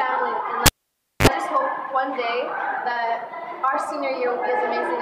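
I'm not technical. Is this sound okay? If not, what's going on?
No. At 0.66 s there's a cable pulled and plugged in: a pop, about half a second of near silence, then a 45 ms burst of 50 Hz mains hum as the plug goes back, and another pop at 1.27 s. That hum and the paired pops set it apart from a plain dropout.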